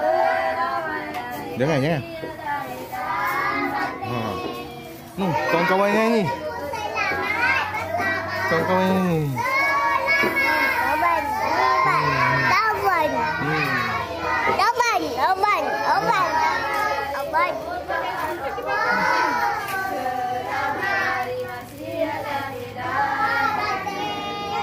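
Nothing stood out as a technical fault on listening to this recording.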